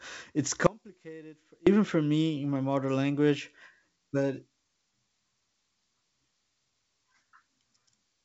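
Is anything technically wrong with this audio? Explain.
Yes. There is an audio dropout to a faint residue from 0.67 to 1.67 s, about one second, ending just before "for me in my". The speech cuts off abruptly, and only a faint trace remains, about 25 dB below the normal level, before it snaps back. The likely cause is the signal being lost upstream while the path after the break stayed live. A waveform shows a sudden collapse to a thin sliver. On a spectrogram, the band-limited speech energy, which stops near 7.7 kHz as expected for G.722, drops to a dim trace with sharp vertical edges.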